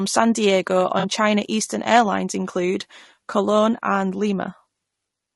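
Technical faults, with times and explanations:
Throughout: low-delay AAC compression. The speech is rough and grainy, with a hiss filling the gaps between voice harmonics and a top band that sounds thinned and synthetic. The likely cause is an AAC-ELD-style low-delay encoder at a low rate, which fits about 32 kbps. At so low a rate the coarse quantization leaves noise between the harmonics. Unlike a brief dropout, this coding damage is constant, plainly audible and never lets up.
0.99 to 1.05 s: AAC frame loss with concealment. For roughly 60 ms the voice briefly smears into a noisy, phasey patch instead of cutting to silence. Missing data, which fits two lost frames of about 40 ms, was filled in by the decoder reusing the last good spectrum with altered signs and estimated energy. That fills the gap with plausible but blurred sound. The gap is too short for the fade to silence that a longer loss would bring, and it differs from the steady compression grain by being a single brief patch.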